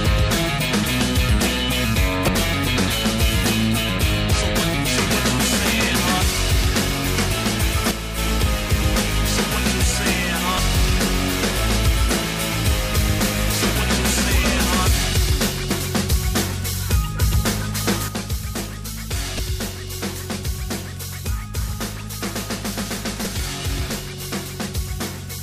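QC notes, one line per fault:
2.25, 10.56, 15.68, 19.36 and 23.23 s, damaged data in a compressed stream: brief blips of about 30 ms each, as the decoder loses frame sync.
7.91–8.18 s and 18.08 s to end, one channel drops out: level falls abruptly by about 6 dB, likely from losing one stereo channel before the mono sum.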